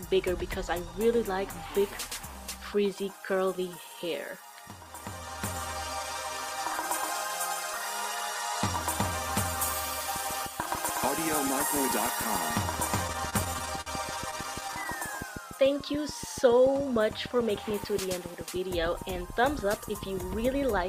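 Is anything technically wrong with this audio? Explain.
Yes, there are two problems, and they overlap for a couple of seconds.

From 10.16 s to the end there's a train of clicks, a regular ticking at about 6.9 per second, peaking a few dB above the audio and audible in the quiet bits too. Same-shaped pulses at a steady rate point to something injecting them, likely electrical interference or a faulty connection.

Between 13.07 and 14.87 s you get repeated stalls, a stutter. Packets arrived late, so the jitter buffer kept running dry and the receiver held the last sound, fading it in longer waits, up to 51 ms. Nothing's lost, but about 235 ms is stretched filler, so it drags and hiccups.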